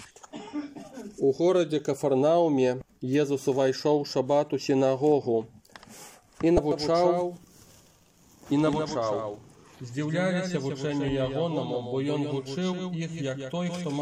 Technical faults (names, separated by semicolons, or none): damaged data in a compressed stream; doubled audio track